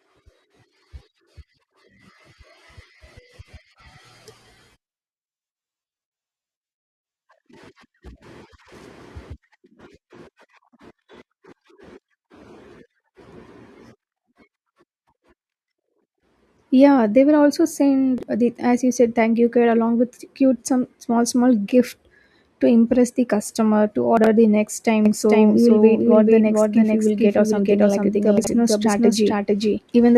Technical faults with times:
18.18-18.23 chunks out of order
24.17-24.26 chunks out of order
25.05-30.18 doubled audio track
28.37-28.47 chunks out of order

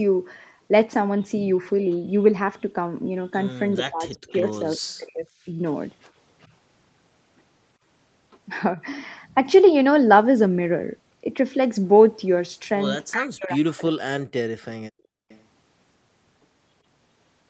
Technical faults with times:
3.76-5.55 speech suppressed in double talk
4.31-4.76 echo leak
6.04-6.47 echo leak
8.76-8.80 speech suppressed in double talk
13.11-14.64 speech suppressed in double talk
13.72-13.76 echo leak
14.92-15.28 background gated by the echo canceller
15.29-15.41 echo leak

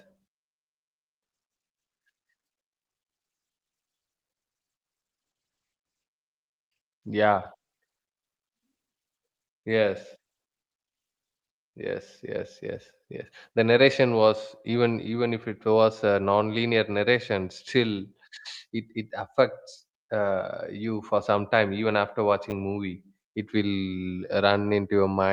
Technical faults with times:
5.23-7.17 call bitrate drop
22.50 chunks out of order

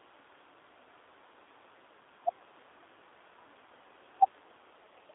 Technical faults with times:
0.00-5.15 G.729 codec

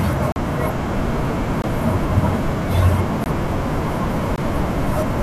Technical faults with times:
0.32-0.36 block of digital silence
1.62 block of digital silence
3.24 block of digital silence
4.36 block of digital silence

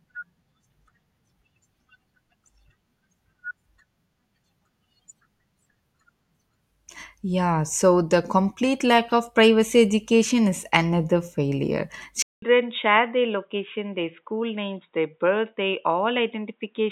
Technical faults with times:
12.22-16.92 input switched to a poorer device

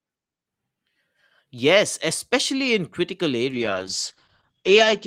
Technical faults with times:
3.52-5.07 call bitrate drop

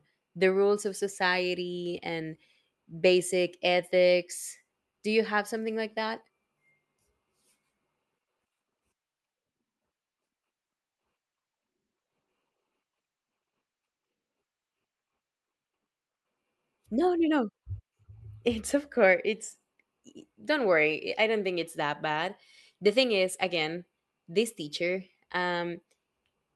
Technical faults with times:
10.92-15.63 call bitrate drop

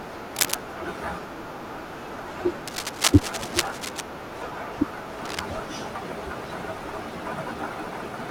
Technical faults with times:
0.35-0.55 cable scratch noise
2.67-4.01 cable scratch noise
5.25-5.41 cable scratch noise

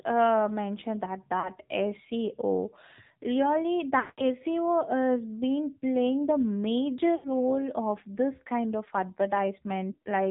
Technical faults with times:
0.00-10.31 AMR narrowband mobile codec
1.40-1.50 lost AMR speech frames
4.00-4.22 lost AMR speech frames
7.16-7.27 lost AMR speech frames
9.92-10.02 lost AMR speech frames

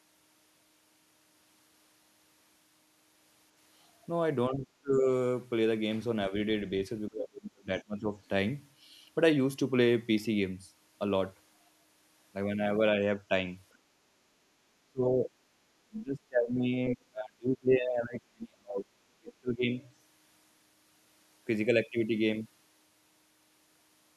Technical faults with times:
4.49-5.06 speech suppressed in double talk
7.08-8.11 speech suppressed in double talk
13.73-13.78 other side's voice leaking through
14.90-15.30 speech suppressed in double talk
15.89-18.94 speech suppressed in double talk
19.20-19.78 speech suppressed in double talk
19.80-19.87 other side's voice leaking through

